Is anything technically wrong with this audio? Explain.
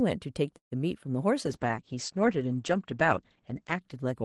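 Yes. From 0.57 to 0.73 s the speech stops and a brief held buzz fades into about 120 ms of silence. That is a call audio freeze, likely from packets arriving late and emptying the jitter buffer. Afterward the speech resumes where it left off, 140 ms later, with nothing skipped. On a waveform it shows as a short decaying tail and then a flat gap. On a spectrogram a smeared, fading stripe ends in an empty band.

From 1.46 s to the end there is a call bitrate drop. The bandwidth estimate fell and the Opus encoder went from 48 kbps down to 11 kbps, holding its lowest rate for about 1.3 s. The speech turns rough and muffled as the cutoff falls from 12 kHz to 8 kHz. A spectrogram shows energy above 8 kHz vanishing and blotchier harmonics below it.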